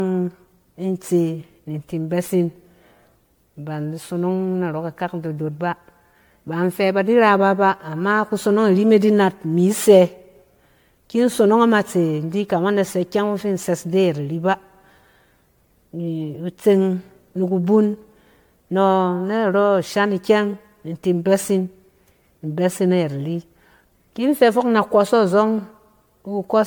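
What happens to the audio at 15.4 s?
Generation loss runs through the whole clip, including 15.4 s: the speech was likely re-encoded about ten times as MP3, leaving it swirly, hollow and smeared with blurred attacks.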